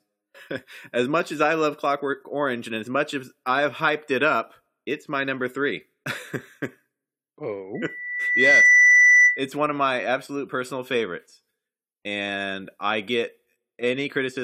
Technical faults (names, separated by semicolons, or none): loudspeaker feedback squeal